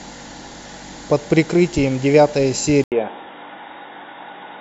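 Speech that goes dull and boxy at 2.84 s, after an 80 ms gap, and stays that way to the end at 4.60 s, with nothing above 3.8 kHz and faint new background noise far below the voice at about the same level. The likely cause is the input switched to a poorer device.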